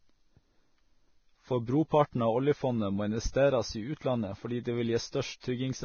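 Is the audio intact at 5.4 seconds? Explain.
No. From 5.40 to 5.43 s a short hiss of about 30 ms runs ahead of a sharp onset. This is pre-echo: the transform block's quantisation noise, sized for the loud attack, spreads back into the quiet just before it. Unlike a click or dropout, it is a smeared hiss that blurs the attack rather than a sudden break.

Around it, the heavy grain, roughened tone and treble ending near 6.6 kHz likely come from Vorbis compression at a very low bitrate, around 18 kbps. That damage runs through the whole clip rather than clustering at attacks.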